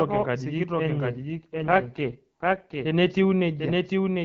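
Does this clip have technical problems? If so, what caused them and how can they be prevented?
Yes. A second capture path, likely slower, or an out-of-step edit mixes the speech in twice, so a dry full-band copy about 5 dB quieter trails the original by roughly 0.7 s throughout: a doubled audio track. Prevent it by routing each source through a single capture path and checking edits for duplicated, offset copies.

From 1.14 to 2.84 s, a weakening radio link makes the network push the AMR-WB codec down, which fits an AMR rate drop from 12.65 to 6.6 kbit/s. The speech turns rough and raspy with no gap or band loss. Prevent it by improving signal coverage or placing the handset where reception stays strong.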